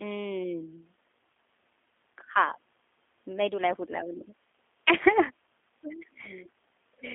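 Speech runs through a G.729 codec from start to finish. Nothing passes above 3.7 kHz and the line band sits near 250 Hz to 3.5 kHz, but unlike a clean telephone line, the voice sounds plainly rough and synthetic, which fits an 8 kbit/s model-based coder.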